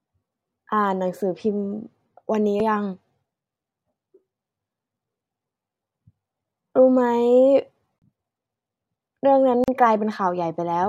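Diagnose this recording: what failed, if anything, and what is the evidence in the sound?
Playback stage: the disc player mistracked twice, a CD skip. At 2.60 s there is a very brief mute of a couple of milliseconds, and from 7.99 to 8.02 s a longer one of around 30 ms. Each time the laser lost its place on the spiral, the player muted, and the speech resumed from a different point.

Codec stage, at the assembly of separately encoded segments: a gap at a join of encoded pieces. From 9.64 to 9.68 s the continuous speech drops into silence for about 39 ms, with smeared edges, then carries on where it stopped. The encoder's start-up delay and last-frame padding were left untrimmed at the join.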